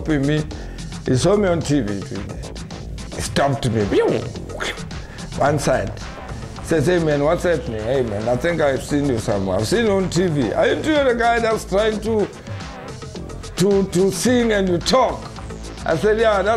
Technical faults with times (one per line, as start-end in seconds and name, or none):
none